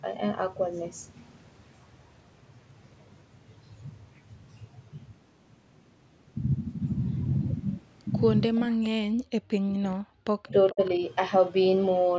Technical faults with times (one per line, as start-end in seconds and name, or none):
8.69-10.81 speech suppressed in double talk
8.83-8.89 echo leak
10.67-10.91 echo leak